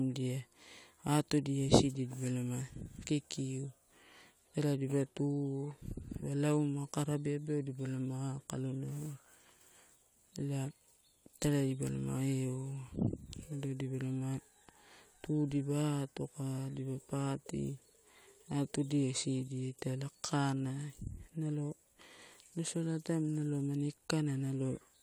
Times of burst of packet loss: none

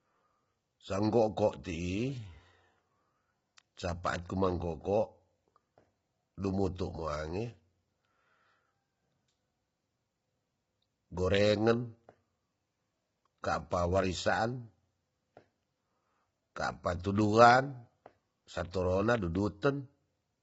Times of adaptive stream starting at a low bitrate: none

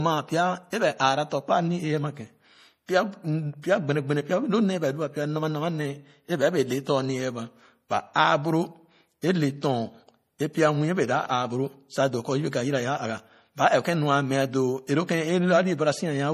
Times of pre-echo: 0.70-0.73, 9.21, 14.87

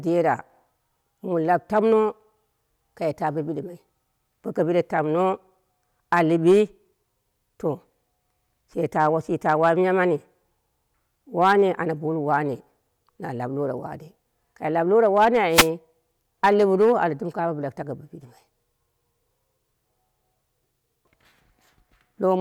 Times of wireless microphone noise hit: 15.50-15.69

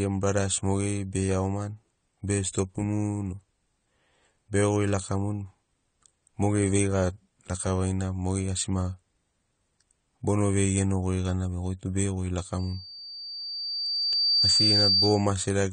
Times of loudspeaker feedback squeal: 12.59-15.34

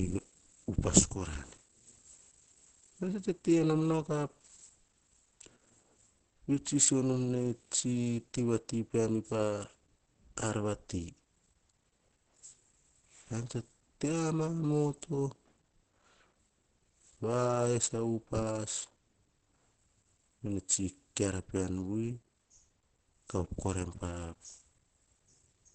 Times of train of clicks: none

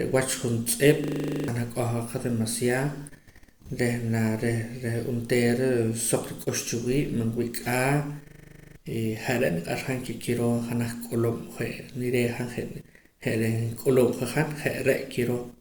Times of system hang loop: 1.04-1.48, 8.28-8.76

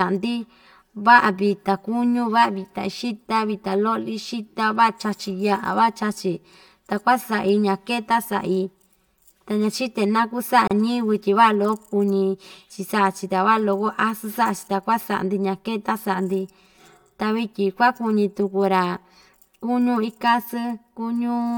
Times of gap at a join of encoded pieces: 10.68-10.71

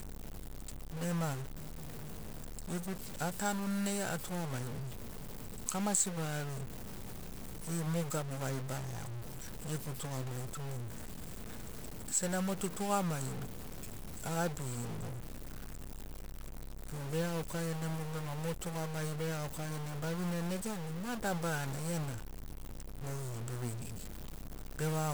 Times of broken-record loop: none

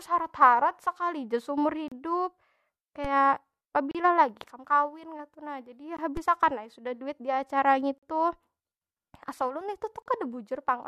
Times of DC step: 3.05, 6.17

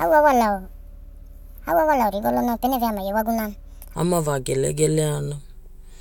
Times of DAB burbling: none

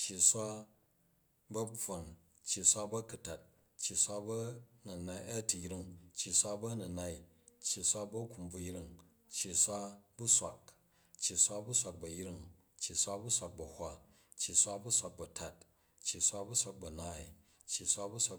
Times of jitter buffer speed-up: none

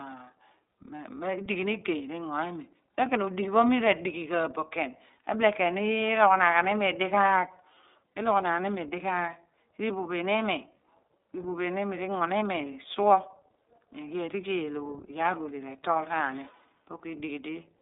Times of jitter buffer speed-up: none

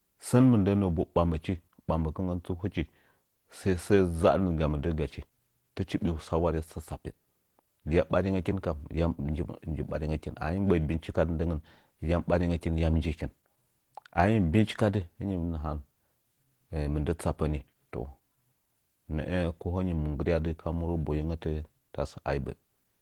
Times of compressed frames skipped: none

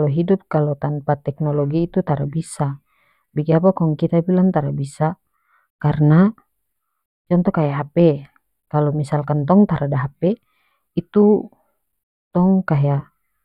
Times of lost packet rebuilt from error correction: none

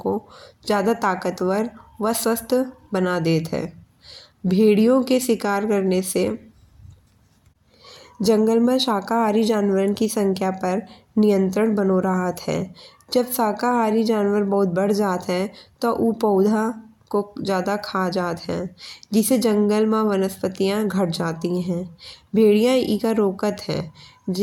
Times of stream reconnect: none

